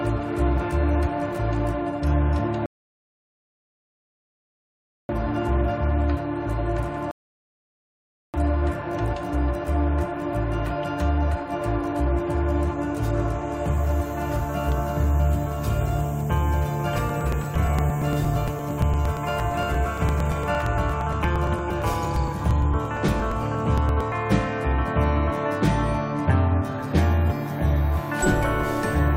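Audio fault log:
2.66–5.09 s and 7.11–8.34 s, rebuffering stall: playback runs dry and goes silent, then picks up right where it left off, adding about 2.4 s and 1.2 s.
16.98–24.12 s, periodic USB or driver dropouts: something blocks the audio path every 0.115 s, skipping around 10 ms each time, so you get steady ticks, roughly seventy of them.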